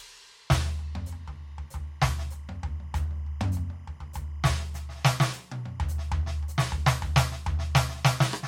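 From start to finish, timecode bleed runs under the music. Linear timecode at 25 frames per second has leaked in from a neighbouring line. Its square wave flips between roughly 1 kHz and 2 kHz, heard as a faint, steady chirping warble some 35 dB down. A spectrogram shows constant horizontal bands near 1 kHz and 2 kHz.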